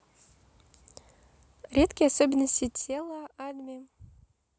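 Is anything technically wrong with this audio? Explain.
Yes. From 2.64 to 3.12 s there is zipper noise on the speech. The level drops by about 15 dB in 1 dB steps, roughly fifty per second, with no smoothing between them. Each step clicks. Together the clicks make a fast ticking that rides on the speech as it fades.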